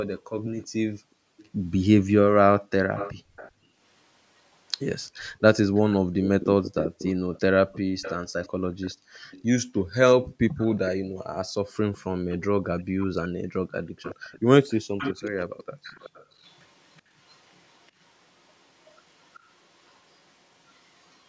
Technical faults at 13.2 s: echo leak

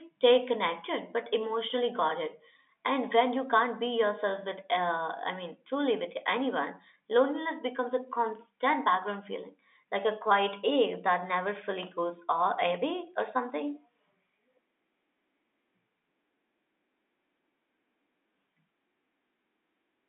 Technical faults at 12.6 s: none

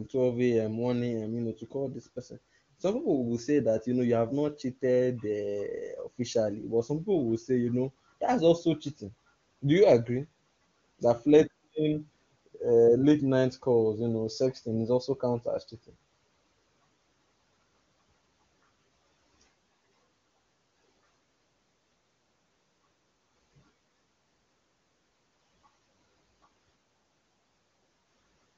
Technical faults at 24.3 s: none

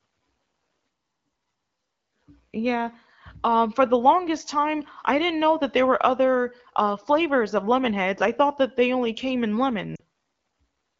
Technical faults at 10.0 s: lost AMR speech frames

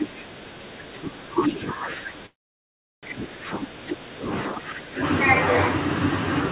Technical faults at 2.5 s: speech suppressed in double talk; call audio freeze

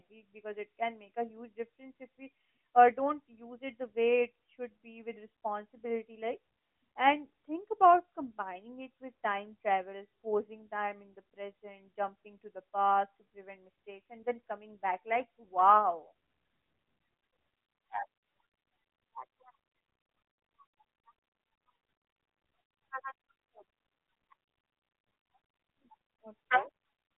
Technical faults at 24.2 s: none

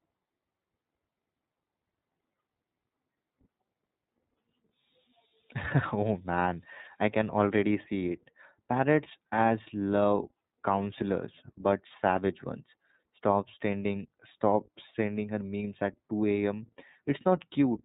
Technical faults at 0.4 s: iLBC codec

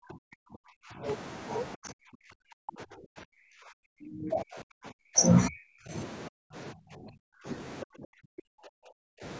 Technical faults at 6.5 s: speech suppressed in double talk

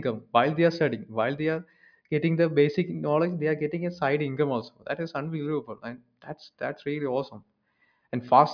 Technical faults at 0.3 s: none

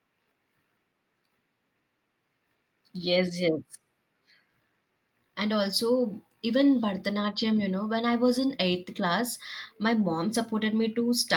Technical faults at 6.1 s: none

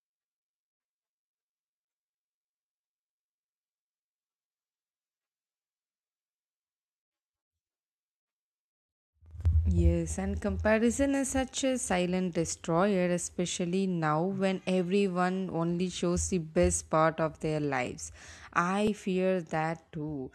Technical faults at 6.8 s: none

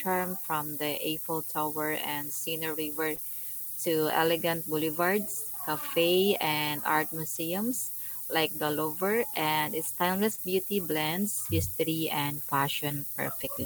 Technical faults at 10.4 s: low bit depth with noise shaping; lost packet rebuilt from error correction; short concealed packet loss

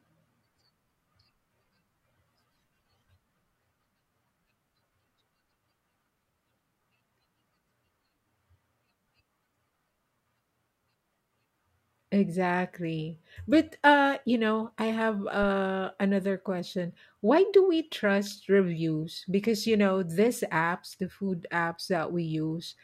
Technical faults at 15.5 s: phantom power thump

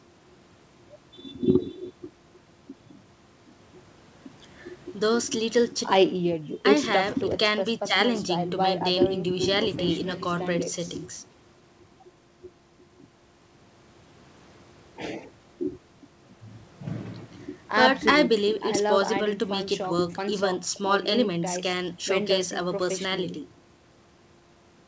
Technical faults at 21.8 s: none

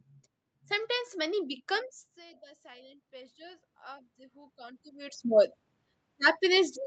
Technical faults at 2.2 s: automatic gain rising

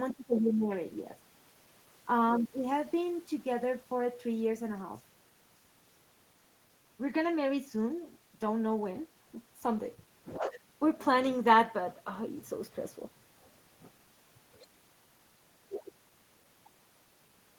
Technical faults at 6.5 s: none

